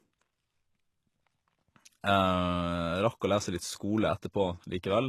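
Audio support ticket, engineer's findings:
Speech gritty and lispy on s sounds throughout, nothing above 12.3 kHz. Likely HE-AAC compression, treble rebuilt from copied lower bands with mismatched harmonics, consistent with about 16 kbps.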